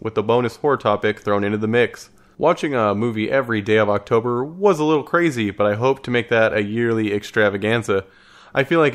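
No technical faults can be heard anywhere in this speech clip. There is no point in the audio that calls for a timestamp.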